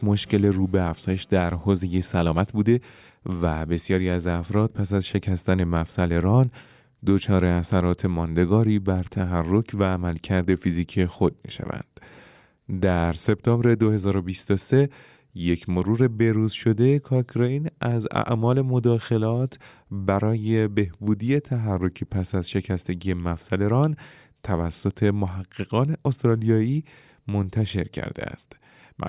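No technical faults can be heard anywhere in the recording.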